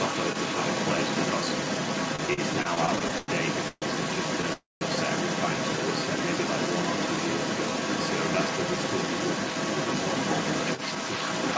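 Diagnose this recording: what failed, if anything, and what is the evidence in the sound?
Call processing, echo cancellation: a second voice, other side's voice leaking through, runs through the whole clip, from 0 to the end, at roughly the same level as the main speech. This is likely residual loudspeaker echo that the echo canceller failed to remove from the microphone signal.

Network and jitter buffer, repeated stalls (stutter): between 2.16 and 3.30 s the audio drags and stutters through 13 short stalls, the longest 101 ms, filling 282 ms in total, about a quarter of that span. Late packets kept draining the buffer, and each stall was bridged by continuing the last sound. Nothing is lost.

Network and jitter buffer, call audio freeze: the audio halts from 3.68 to 3.84 s, with 137 ms inserted including about 20 ms of silence, and again from 4.53 to 4.83 s, with 282 ms inserted including about 170 ms of silence. 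In both, the last sound is held and fades before playback resumes where it stopped. This is likely packets held up in transit emptying the buffer.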